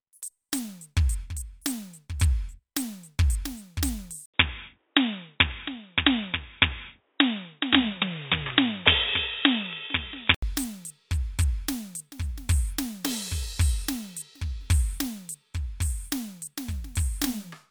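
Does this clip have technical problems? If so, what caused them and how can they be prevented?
Yes. Between 4.26 s and 10.43 s the music turns dull and boxy at much the same level. Nothing passes above 3.8 kHz, a new noise floor appears about 45 dB below the signal, and an 80 ms silence marks the switch. This points to an input switched to a poorer device, likely a different microphone or a headset call profile. To prevent it, lock recording to one input device and disable automatic device or profile switching.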